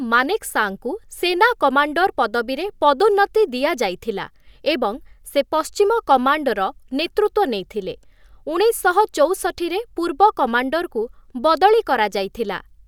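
No technical faults can be heard anywhere in the speech recording, from the first moment to the last.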